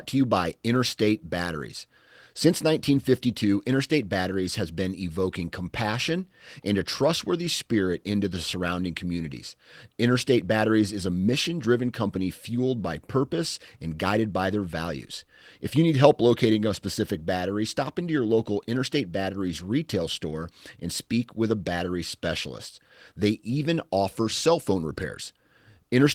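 No faults are audible in this speech; the Opus voice compression leaves only light coding texture, and the full bandwidth suggests a hybrid mode at around 20 kbps.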